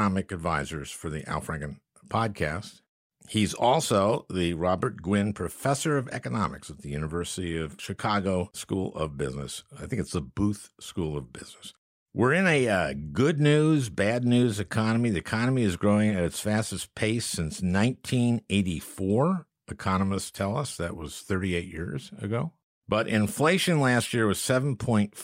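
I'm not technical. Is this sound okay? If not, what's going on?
Yes, no faults heard.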